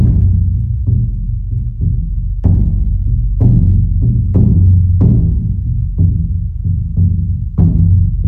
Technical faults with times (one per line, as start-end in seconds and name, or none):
none